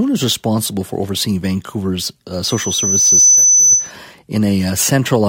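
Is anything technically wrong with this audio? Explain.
Yes. From 2.43 to 3.91 s there is loudspeaker feedback squeal. The microphone-loudspeaker loop exceeds unity gain at 6 kHz, so a pure tone swells over about a second to roughly 10 dB above the speech.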